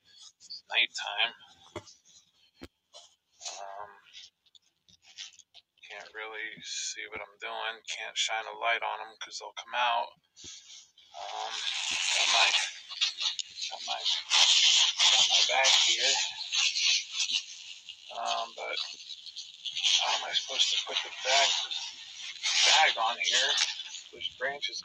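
Channel delay with comb filtering runs through the whole clip. One channel arrives late, by around 10 ms, and the two channels are then summed to mono. Content common to both cancels at evenly spaced frequencies. The first notch sits low, near 40 Hz, and more follow at regular steps up the spectrum. The notches never move. The result sounds hollow and phasey, and stays constant from start to finish.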